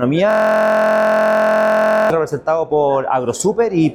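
From 0.31 to 2.10 s there's a system hang loop: the system froze while the audio hardware kept replaying the same 23.22 ms chunk, which fits a 1024-sample buffer, 77 times over. It comes across as a steady buzz at about 43.1 Hz.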